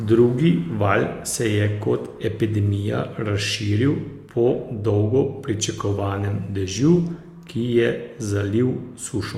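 An adaptive stream at a lower bitrate runs from 4.23 to 8.23 s in this speech clip. Codec artefacts rise, which fits an Opus stream dropping from 64 to 32 kbit/s after a connection slowdown. The switch is abrupt but leaves no gap.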